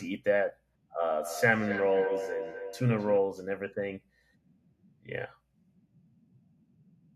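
Feedback echo between two devices runs from 1.15 to 3.34 s. A second device in the same room is replaying the call, and the first microphone picks that playback up and sends it back round. Its echo canceller cannot remove sound coming from another device's speaker. The speech returns at a steady interval of roughly a third of a second, as a thinner, ringing copy that peaks at about 8 dB below the direct speech.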